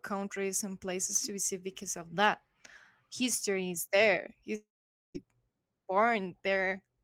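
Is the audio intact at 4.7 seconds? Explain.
No. At 4.7 seconds the speech sits inside a long network dropout running from about 4.55 to 5.16 s, just after "is there". The likely cause is a stall in the incoming stream: the receiver stretches the last sound into a brief fading buzz or hiss, then leaves roughly half a second of silence. About 0.6 s of audio is lost outright, and speech resumes at 5.16 s without the missing portion.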